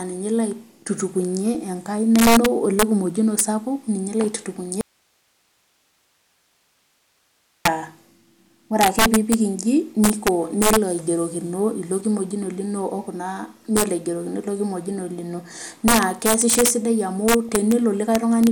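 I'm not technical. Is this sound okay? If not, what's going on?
No. There are three separate problems in this speech recording.

Integer overflow runs through the whole clip. The loudest peaks were pushed past the largest number the system can store, and they wrapped round to the opposite extreme. A volume limit should have capped them instead. Only a small fraction of moments go that high, but each one comes out as a sudden harsh crack. These cracks are sharper and nastier than ordinary distortion from a recording that is too loud.

DAB burbling appears at 1.55 s, from 8.90 to 9.01 s, from 12.34 to 12.51 s, at 14.86 s and at 17.49 s. This is what weak digital radio reception does. Damaged data gets past the receiver's error correction, so wrong values end up in the sound. At each of these times you hear a short blip of noise on top of the speech.

An audio dropout to a faint residue runs from 4.81 to 7.65 s, about 2.8 seconds. 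The speech cuts off abruptly, and only a faint hiss remains until it returns just as suddenly. A pause or fade would sound different. The likely cause is that the signal itself was lost while the equipment after the break kept running, so its background noise carried on through the gap.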